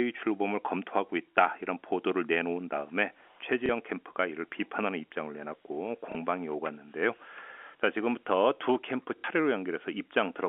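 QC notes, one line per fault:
3.66–3.69 s, 6.12–6.15 s and 9.18–9.24 s: packet loss with last packet repeated. Each gap is filled by replaying the previous chunk, not by silence, so the two single losses sound like small blips and the 60 ms run like a brief robotic stutter. The 60 ms run buzzes at about 33 Hz, which fits 30 ms packets.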